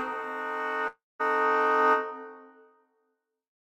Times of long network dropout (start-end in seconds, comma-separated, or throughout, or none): 0.87-1.21